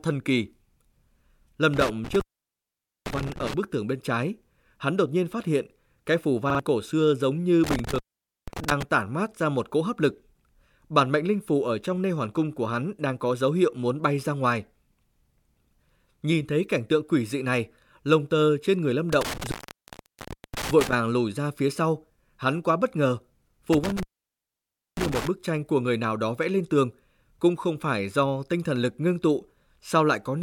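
Intermittent contact at 1.74 to 3.54 s: a loose cable or plug breaks the connection, and the speech drops out for about 0.85 s, with crackle where the contact opens and closes and faint hiss left in the gap.

Repeated buffer at 6.50 to 6.60 s: new audio arrives late, so the device replays its last chunk. A 46 ms piece sounds twice more with hard joins, making a quick stutter. The stall costs roughly a tenth of a second of speech, and the repeat length fits a 2048-sample buffer.

Intermittent contact at 7.64 to 8.83 s: the connection breaks again, cutting the sound for about 0.48 s with crackle at both edges.

Repeated buffer at 8.64 to 8.68 s: inside that disturbance, a 46 ms chunk plays once more after a hard join. It is heard as a brief catch, and about 50 ms of speech is lost.

Intermittent contact at 19.13 to 20.93 s and 23.73 to 25.27 s: the connection opens twice more, for about 1.02 s and 0.94 s. 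Each gap leaves crackle at the edges and faint hiss in between.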